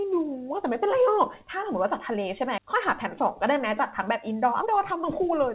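At 2.58 s a stretch of audio was dropped while later audio was already waiting, and roughly a second of speech was lost outright. This skip ahead runs to 2.75 s: playback jumps forward with no gap or fill, and the speech on either side is spliced together almost directly, so a chunk of the utterance simply vanishes and the sentence lurches on mid-flow.

From 3.52 s to 5.47 s the receiver was holding more buffered audio than its target and trimmed it by repeatedly cutting out short pitch-period slices, around 150 ms in total. This jitter buffer speed-up makes the speech run at about 108% of its natural rate while the pitch stays unchanged, so the closing stretch sounds noticeably hurried. Throughout, the band stops at 4 kHz, consistent with a G.711 A-law call path.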